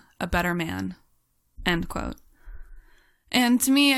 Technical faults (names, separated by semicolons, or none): damaged data in a compressed stream